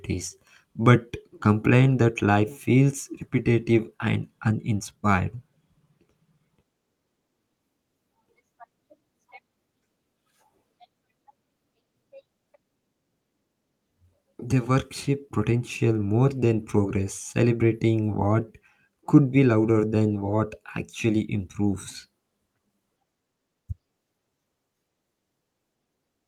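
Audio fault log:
No fault is heard anywhere in the speech.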